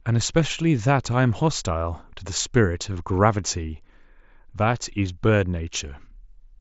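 No technical faults are audible in this speech.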